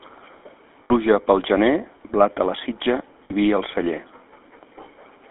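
Throughout the speech, the GSM full-rate codec gives a buzzy, gravelly roughness. The spectrogram shows a band from 250 Hz to 3.5 kHz with coarse, pulse-driven harmonics, which fits a 13 kbps stream. At 0.84 to 0.92 s, just before "pel gener blat a", lost GSM frames were filled by repeating the last good frame. This leaves a rough metallic ring that shows as flat, smeared spectral bands and a held waveform envelope. At 3.24 to 3.33 s, between "blat a la sitja" and "i vi al celler", the same repeated-frame ring appears as a short horizontal smear.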